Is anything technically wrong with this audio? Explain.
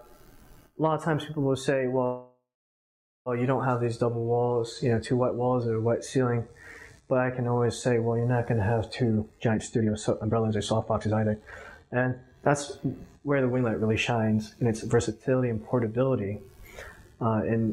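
Yes. From 2.05 to 3.29 s there is a call audio freeze: the last sound is drawn out as a fading buzz, then about 0.83 s of silence, before the audio resumes where it stopped, now 1.2 s late. The likely cause is delayed packets emptying the jitter buffer. A spectrogram shows smeared, decaying horizontal bands, then a blank gap; the waveform shrinks to flat.

Two jitter buffer speed-ups follow. From 9.20 to 12.12 s the receiver trims repeated pitch-period slices to drain excess buffered audio, so playback runs at 133% speed with unchanged pitch, losing about a second and sounding hurried. From 13.27 to 16.27 s a milder 107% pass removes about a fifth of a second. On a spectrogram, harmonics stay level while events crowd together in time.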